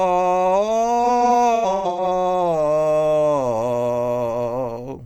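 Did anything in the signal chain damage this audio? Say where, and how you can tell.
Yes. AAC frame loss with concealment at the codec stage damages the music from 1.04 to 2.07 s. Short dropped frames, about 470 ms in all, each no longer than roughly 100 ms, were concealed from the last good spectrum. That leaves smeared, noisy, phasey patches rather than clean gaps.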